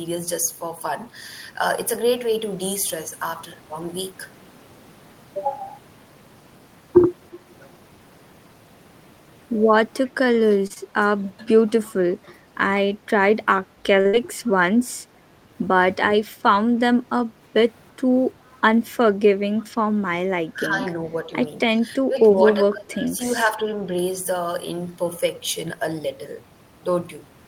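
At 10.06 s and again at 11.89 s, a faint copy of earlier sound surfaces about 338 ms late, well below the main level. This is an echo leak, likely a far-end loudspeaker echo that the echo canceller failed to remove. The fixed 338 ms offset and its repeated return distinguish it from reverberation.

From 10.67 to 10.72 s comes a short stall from a late packet: a sound is held about 25 ms too long, then resumes where it stopped, so nothing is lost.

Right after, at 10.74 to 10.78 s, a short concealed packet loss replaces about 20 ms of audio with a brief smear. Unlike the stall, here real sound is dropped.

At 14.01 to 14.07 s another stall stretches the last sound by about 36 ms. It runs straight into a burst of packet loss from 14.07 to 14.15 s, where about 60 ms goes missing. The held sound fades as it is extended, then the audio jumps ahead. The gap is longer than in the 10.7 s loss.

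The same 338 ms echo leak returns at 18.47 to 18.59 s and at 19.58 to 19.65 s.

From 20.53 to 21.30 s and from 21.75 to 23.93 s comes what is likely speech suppressed in double talk. The voice dips in pieces, by around 10 dB and then around 15 dB. Unlike packet loss, it loses level rather than being held or skipped.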